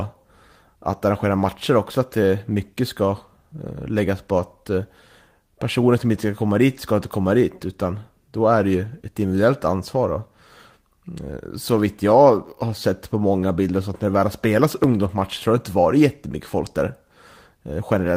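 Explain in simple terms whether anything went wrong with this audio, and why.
Nothing went wrong here.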